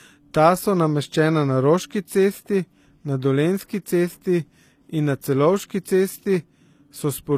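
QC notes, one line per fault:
throughout – low-bitrate audio saved at a high bitrate: the speech has nothing above 14.9 kHz and keeps the smeared texture of a heavily compressed source. The likely cause is an encode at a very low bitrate, which fits something like HE-AAC near 24 kbit/s, that was later saved again as high-bitrate MP3. The second encode cannot restore what the first one removed. A simple low-pass filter would give the cut-off without the compression smear.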